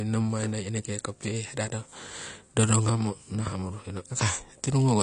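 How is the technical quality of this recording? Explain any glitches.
The recording is compromised by lossy compression, plainly audible from start to finish. The likely cause is AAC compression, consistent with AAC-LC at a low rate, which fits a bitrate around 32 kbps. At that rate the encoder cannot afford to code the upper spectrum, so nothing survives above 10 kHz, and the remaining frequency lines are quantised coarsely. The speech therefore sounds dull and smeared, with a warbling, fizzy edge on sibilants and sustained sounds.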